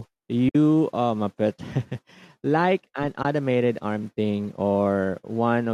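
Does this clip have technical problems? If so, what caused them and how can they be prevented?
Yes, there's AAC frame loss with muting at two spots: a longer gap from about 0.49 to 0.55 s and a short one from about 3.23 to 3.25 s. These are soft-edged holes, because the decoder zeroed the missing frames and the overlapping windows fade the speech down and back up. The 60 ms and 20 ms gaps fit 10 ms frames from a low-delay AAC stream, likely AAC-ELD. To prevent it, add forward error correction or a proper concealment mode on the receiver.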